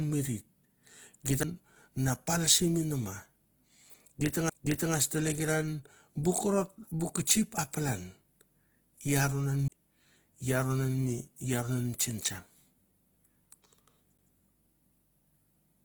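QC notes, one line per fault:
Throughout: Opus compression. The speech sounds grainy and rough rather than swirly, with a hiss-like texture where fine harmonic detail should be, most likely from Opus in its CELT music mode at a low rate, which fits roughly 16 kbps. Band energies are kept but filled with folded or noise content, so on a spectrogram the harmonics look smeared and speckled, with few holes, and full bandwidth extends to about 20.4 kHz.
1.43, 4.49, 9.68, 14.17 s: CD skip. At each of these four points a short tick comes with a brief mute of roughly 5 to 15 ms. The sound then resumes from a different place, as the laser jumped tracks on the disc spiral. The second one falls just before "tlekeran bu korot". The waveform shows a sharp discontinuity with a near-silent sliver, and the spectrogram shows a thin vertical broadband line where the speech pattern changes abruptly.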